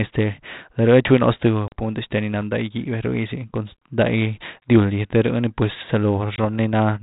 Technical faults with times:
1.68-1.73 packet loss on an ADPCM call
4.60-4.69 packet loss on an ADPCM call
6.36-6.43 packet loss on an ADPCM call

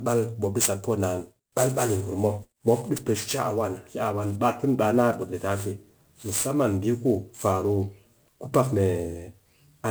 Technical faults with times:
0.00-9.90 sample clock jitter

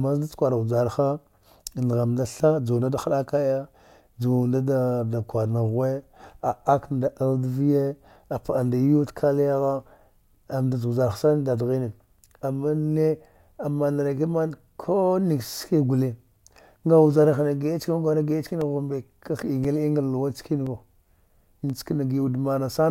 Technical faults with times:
18.61-22.72 periodic USB or driver dropouts

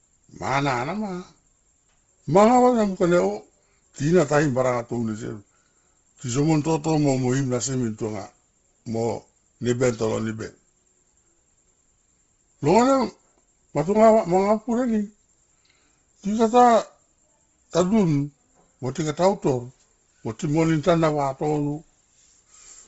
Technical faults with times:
0.00-22.88 Bluetooth LC3 compression

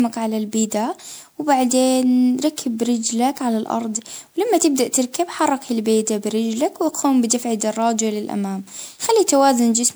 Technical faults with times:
0.00-9.96 generation loss

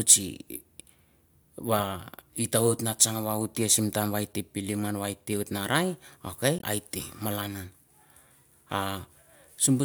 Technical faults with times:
6.57-6.64 damaged data in a compressed stream

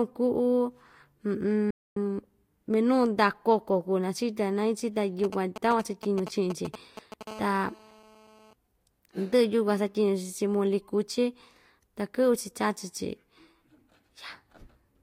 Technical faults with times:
1.70-1.96 playback stall
5.24-7.23 GSM signalling bursts
7.27-8.53 GSM phone buzz

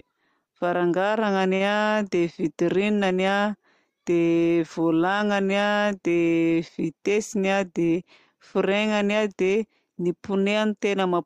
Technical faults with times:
0.00-11.26 sample clock jitter
1.55-1.72 short stall from a late packet
6.88-7.43 jitter buffer speed-up

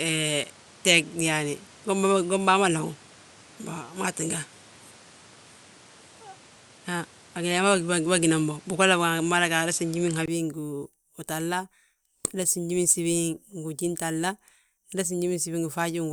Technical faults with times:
0.00-10.28 input switched to a poorer device

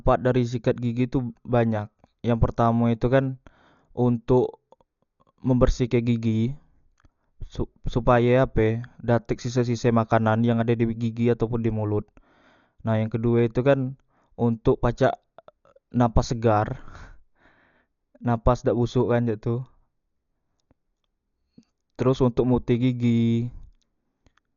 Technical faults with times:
0.00-24.56 Dolby Digital compression

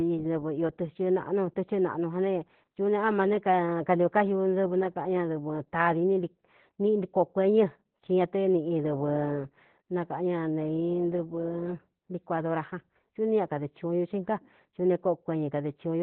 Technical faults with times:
0.00-16.02 Opus voice compression

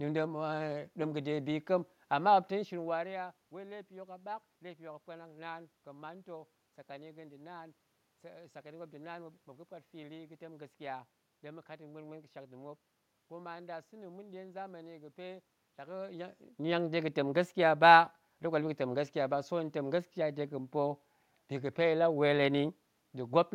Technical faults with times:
none

